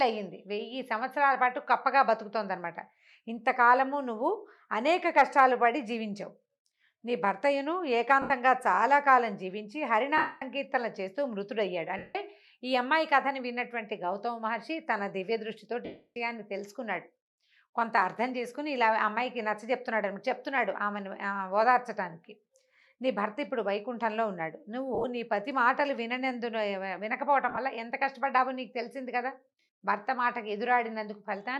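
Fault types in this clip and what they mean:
Lost LE Audio frames: at 8.22, 10.17, 11.97, 15.85, 24.95, 27.49 and 29.61 s, gaps of 70 to 310 ms where the LC3 decoder repeats the last spectrum with scrambled signs, so the sound blurs into a noisy smear that fades on the longer losses.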